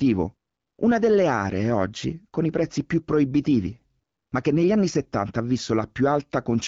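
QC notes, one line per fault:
No faults to log. The speech has the band-limited sound of AMR wideband (HD Voice) coding, with a light coding texture that fits a rate of about 12.65 kbit/s.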